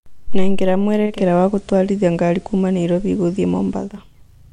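At 0.97 s the speech cross-fades over about 0.3 s from digital to FM, a digital radio blending to analogue. Level shifts by about 3 dB, and faint hiss sits roughly 40 dB down until the return at 4.04 s.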